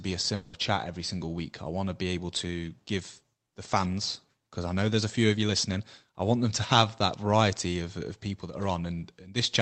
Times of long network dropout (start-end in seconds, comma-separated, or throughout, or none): 0.35-0.55